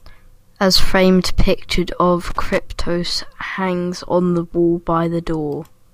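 At 2.30 to 2.59 s the speech breaks into loose connector crackle. A worn contact makes and breaks, chopping the signal into an irregular scratchy burst.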